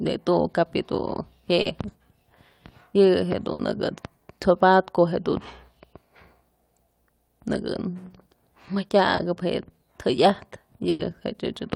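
At 1.61 s and again at 9.15 s there is short concealed packet loss. Audio spanning 40 ms and then 20 ms arrived too late, so the receiver extended the preceding sound, leaving a brief smear. At 3.53 s and 10.89 s a burst of packet loss removes 60 ms and then 100 ms. The last sound is held and faded before the audio resumes further on, with that stretch missing.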